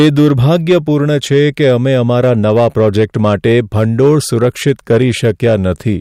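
Hard clipping runs through the whole speech clip: it's driven about 6 dB past full scale, so a small share of peaks get sliced flat, crackling on loud syllables.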